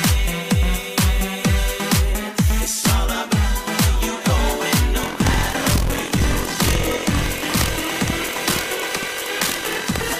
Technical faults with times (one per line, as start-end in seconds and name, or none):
5.02-10.12 buffer tearing